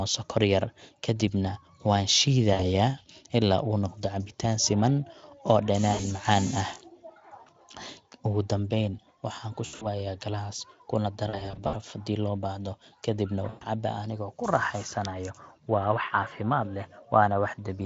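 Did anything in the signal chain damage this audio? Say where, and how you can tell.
Yes, there's VoIP packet loss concealed by the speech codec on the network side: fading smears at 2.53, 5.93, 9.65–9.87, 11.29–11.75 and 13.49 s, where the decoder stretches its last frame while gain drops.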